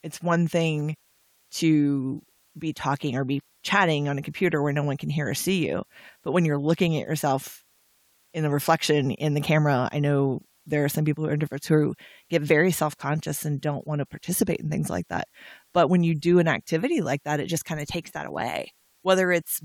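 It's a speech clip with low bit depth with dither throughout: a steady, even hiss about 40 dB under the speech, no distortion, consistent with roughly 10-bit rounding.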